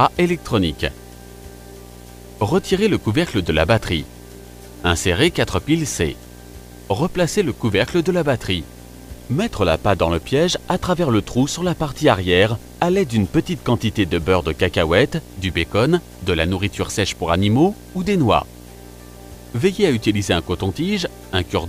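Video or display buzz runs through the whole clip. A 60 Hz field-rate buzz with hash above it sits about 20 dB below the sound, coupled from a screen or video cable.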